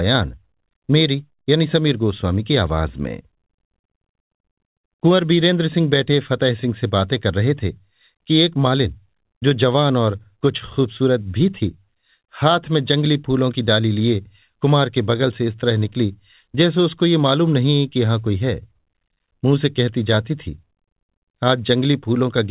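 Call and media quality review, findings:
Nothing to flag on this one: the speech arrives over an ordinary call path with nothing above 4 kHz, which fits G.711 mu-law at 64 kbps, and no faults turn up along the way.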